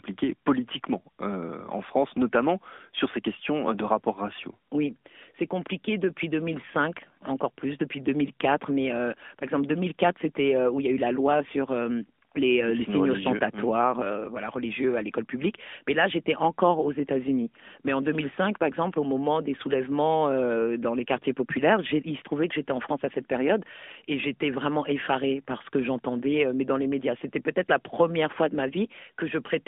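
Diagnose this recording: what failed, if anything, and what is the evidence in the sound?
The failure is at the codec stage. The whole recording has passed through an AMR narrowband mobile codec, the AMR-NB speech coder. Throughout the clip, the speech sits in a telephone band of roughly 200 Hz to 3.5 kHz. Nothing above 4 kHz survives. The voice carries a plainly audible buzzy, synthetic edge. That points to a mid-rate mode near 10 kbps. The codec rebuilds speech from a vocal-tract model and a few pulses per subframe, so fine detail is lost.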